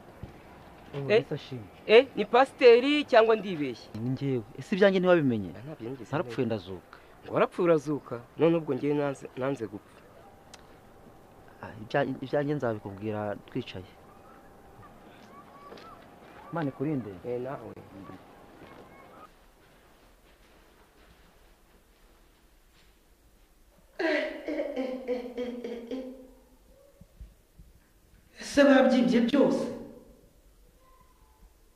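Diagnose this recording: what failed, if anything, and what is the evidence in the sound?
Two brief dropouts break otherwise continuous sound, one at 17.74 s lasting about 29 ms and one at 29.30 s lasting about 24 ms, each with smeared edges before the sound resumes where it left off. These are gaps at a join of encoded pieces: separately encoded segments were concatenated untrimmed, leaving each encoder's start-up delay and final-frame padding as silence.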